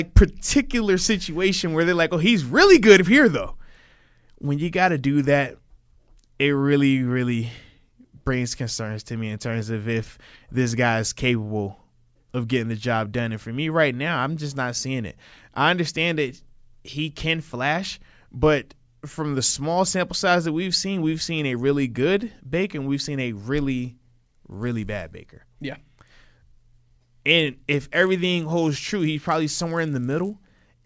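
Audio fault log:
23.69–30.85 s, resampler restarted on every block: each 10 ms block was converted in isolation during a 24 kHz to 16 kHz conversion, so every block edge carries a small error, and the speech gains a 100 Hz buzz that sounds only while signal is present.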